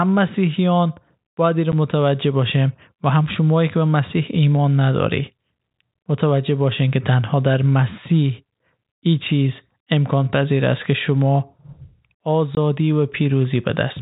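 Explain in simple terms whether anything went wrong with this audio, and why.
Packet loss filled with silence occurs at 1.72 s and again from 12.55 to 12.57 s. In this telephone-quality speech, sound travels in small chunks called packets. When some never arrive, the receiver plays nothing in their place. The first gap lasts 10 ms, fitting one missing packet. The second lasts 20 ms, pointing to two missing in a row. Both gaps start and stop abruptly.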